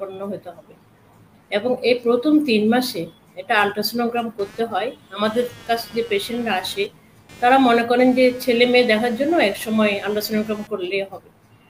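From 4.39 s to 10.67 s, a buzzing, chirping layer of computer activity noise sits under the sound. Shifting load on the computer's processor or graphics hardware disturbs the ground shared with the audio circuit, so the activity leaks in as pulses around 200 times per second, roughly 25 dB below the sound. On a spectrogram it shows as a comb of evenly spaced vertical striations across the band. In the waveform a fine, regular ripple appears that does not follow the sound's envelope.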